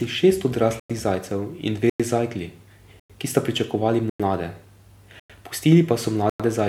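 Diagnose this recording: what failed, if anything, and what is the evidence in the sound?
Gap between chunks at 0.80, 1.90, 3.00, 4.10, 5.20 and 6.30 s, each a 100 ms silence; the last follows "pa so". The playback or streaming stage inserts silence at every join between one-second chunks, interrupting the speech without removing any.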